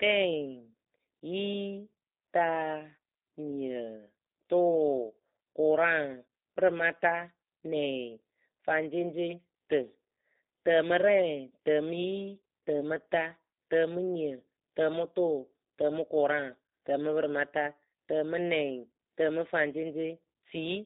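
From start to finish the speech carries G.729 codec damage: content is confined to roughly 200 Hz to 3.7 kHz, so a spectrogram shows a hard ceiling with nothing above it. Pulse-built excitation makes voicing sound rough and synthetic, consistent with an 8 kbit/s G.729A coder.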